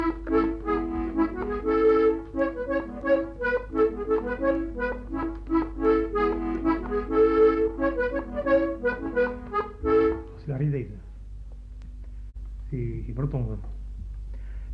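No technical faults can be heard anywhere in this recording.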